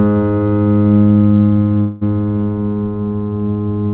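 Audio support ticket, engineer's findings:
Call audio freeze, 1.80–2.03 s. Music stalls; last sound stretched into a fading buzz for about 212 ms, then resumes where it stopped. Nothing lost, playback now about 212 ms late. Likely packet delay draining the jitter buffer, receiver concealing the gap. Call path audible as band limit at 4 kHz plus coding noise, consistent with G.711 A-law at 64 kbps.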